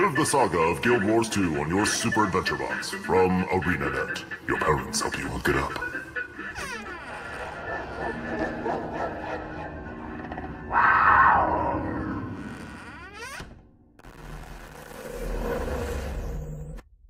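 Nothing in this one calls for comment: no glitches, dropouts or distortion turn up anywhere in the sound, so there's simply no fault to point to.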